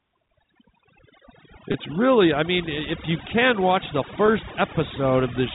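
Speech over a G.711 telephone path, which passes nothing above 4 kHz, with overdone noise removal throughout: the suppressor pulls frequency bands down whenever they sit near its noise estimate, so quiet parts of the voice vanish with the background noise. The background drops and breaks up into twinkling specks. Two gaps show packet loss with pitch repetition: at 1.72 to 1.74 s, just before "really I mean if", and at 4.26 to 4.28 s, right after "you can watch the", the receiver fills about 20 ms, which fits a single lost packet, by repeating the last pitch period. Each gap is heard as a brief, slightly held buzzy tone before the speech resumes.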